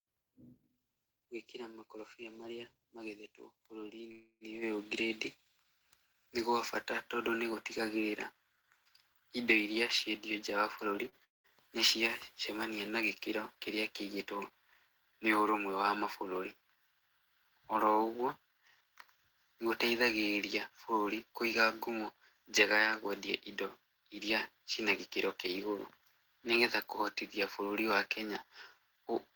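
At 4.11 to 4.44 s there is a call audio freeze, likely from packets held up in transit. The last sound is drawn out as a fading buzz for about 0.29 s, ending in 40 ms of silence, before the speech resumes where it stopped. Nothing is lost, but the stream now runs roughly 0.29 s later. On a spectrogram it shows as smeared, repeating harmonics that decay to a blank strip.

From 9.82 to 11.04 s a jitter buffer speed-up trims short pitch-period slices, totalling about 50 ms, so the speech plays about 3% faster at unchanged pitch. On the waveform the periods look evenly compressed, with no visible gap.

At 11.09 to 11.15 s comes a short stall from a late packet. The sound is held 32 ms too long, heard as a brief buzzy hang just before "nĩ cia cemania na". It appears as a thin, flattened stretch of frozen spectrum.

At 11.24 to 11.47 s there is a long network dropout, likely from lost packets, again just before "nĩ cia cemania na". 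A short fading buzz gives way to about 160 ms of silence, and roughly 200 ms of speech never returns. The waveform shows a flat gap, and the speech picks up further on.

From 18.47 to 21.34 s, ending at "kũiga ngumo", a second jitter buffer speed-up removes around 0.3 s of material. The speech runs about 10% fast and sounds hurried but keeps the same pitch. On a spectrogram the syllables look tightly packed.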